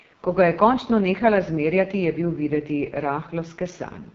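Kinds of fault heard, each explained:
AMR wideband (HD Voice) codec: the speech runs throughout through AMR-WB at its lowest rate, 6.6 kbit/s, where the pulse-driven vocal tract model is starved of bits. Voices sound heavily rough and raspy, and nothing is heard above about 7.1 kHz.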